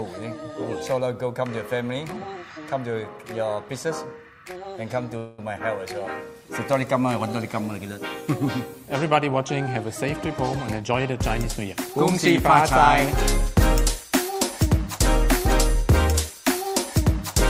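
The audio stalls from 5.17 to 5.41 s. The last sound is drawn out for about 0.2 s as a fading buzz or hiss rather than dropping to silence, and then it carries on from exactly where it stopped, so nothing is lost but a short pause is inserted. This is a call audio freeze, likely caused by packets held up in transit until the jitter buffer ran dry, with the receiver stretching the final sound to cover the wait. Later, the audio runs faster without any change in pitch in three stretches: 10.8 to 11.74 s at 110% speed, 13.4 to 14.4 s at 106%, and 14.98 to 16.31 s at 103%. These are jitter buffer speed-ups. Once the delayed audio arrived, the buffer was holding more than it needed, so the receiver cut out many tiny pitch-period slices to catch up. It trimmed roughly a tenth of a second in the first stretch and progressively less in the next two.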